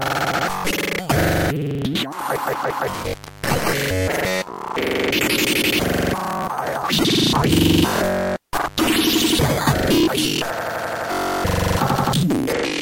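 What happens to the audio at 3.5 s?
At 3.5 s the sound sits within an intermittent contact fault running from 2.94 to 3.63 s. A loose cable or plug loses connection, cutting the audio for about 301 ms. Unlike a clean digital dropout, crackle marks the edges and faint hiss remains during the gap.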